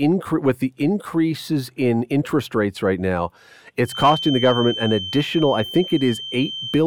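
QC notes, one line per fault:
3.82–6.87 s feedback whistle: after "interest rates right now", a thin, steady whistle near 3.1 kHz sits roughly 10 dB below the speech, slowly swelling and fading in level. This is likely a loudspeaker-to-microphone loop held just at the edge of feedback, sustaining that single frequency without running away.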